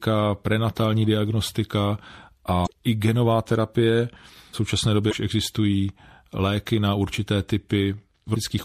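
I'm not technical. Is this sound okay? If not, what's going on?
No. Throughout the recording, the speech sounds watery and swirly, with dull, muffled treble and harsh, metallic edges on s sounds. This is likely MP3 compression at a low quality setting: the encoder cut the highest frequencies and dropped quieter details that flicker in and out.

Damaged data in a compressed stream causes short chirps or blips at 2.63 to 2.67 s, 5.08 to 5.13 s and 8.32 to 8.36 s. Part of the file is corrupted there, so the player misreads it and loses its place.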